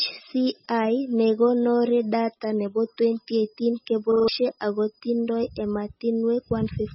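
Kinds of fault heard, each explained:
MP3 compression: Throughout, the speech has nothing above 5.6 kHz and a heavy watery, swirling texture, likely from MP3 encoding at a very low bitrate, around 16 kbps. Starved of bits, the encoder cuts off the treble and lets weak frequency lines flicker on and off between frames.
Repeated buffer: From 4.12 to 4.28 s, one 40 ms piece of speech plays four extra times with a hard join at each repeat, giving a short stutter. Fresh audio arrived late, so the device replayed its last buffer, and about 150 ms of speech is missing.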